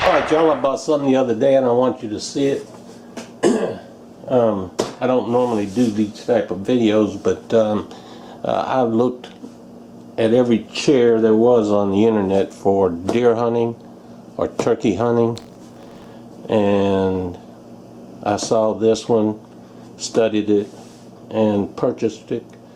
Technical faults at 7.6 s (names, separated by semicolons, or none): none